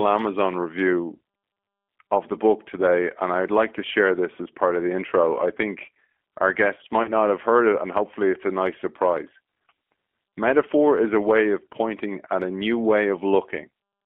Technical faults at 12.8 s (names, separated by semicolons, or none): G.729 codec